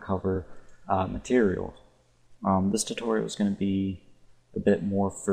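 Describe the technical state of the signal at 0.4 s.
Repeated frames at 0.35–0.37 s: one 23 ms block plays twice, giving a stutter. The waveform shows an identical segment repeated.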